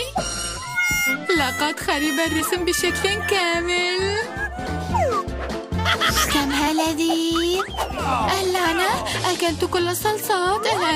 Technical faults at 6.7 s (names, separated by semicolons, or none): compressed frames skipped